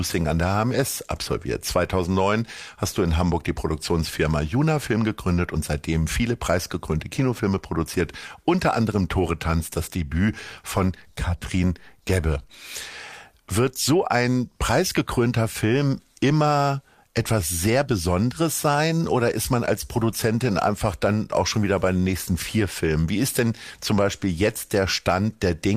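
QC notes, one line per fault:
No faults found: nothing in the signal calls for attention.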